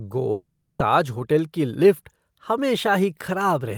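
A speech clip with a long network dropout from 0.31 to 0.82 s. Sound fades into a buzzy tail, then silence. About 480 ms is likely lost.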